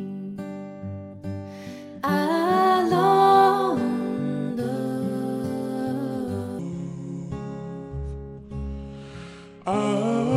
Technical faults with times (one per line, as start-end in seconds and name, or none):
6.59-10.36 section at the wrong speed